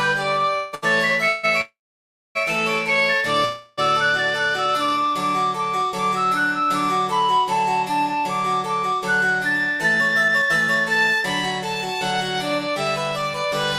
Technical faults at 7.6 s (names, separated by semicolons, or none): none